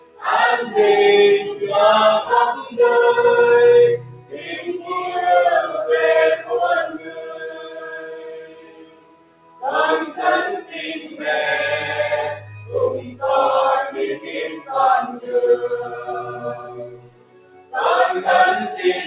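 Throughout, held and fading parts of the sound sink while attacks punch through, so the level pumps and thins, swinging by around 20 dB. A noise suppressor built for speech was left running on this material and treats its steady content as noise.

That sound cut by the noise suppressor is clearest at 0.00–0.24 s (drop of about 16 dB), 2.58–2.77 s (about 9 dB), 3.98–4.91 s (about 15 dB), 6.92–9.63 s (about 16 dB), 10.99–11.21 s (about 6 dB), 13.06–13.22 s (about 10 dB) and 16.36–17.74 s (about 16 dB). At those points sustained or decaying sound collapses or is truncated as the suppressor clamps down, within a band that stops near 4 kHz, as the G.711 call path gives.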